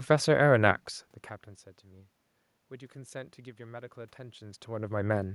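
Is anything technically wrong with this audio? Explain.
No, nothing is technically wrong.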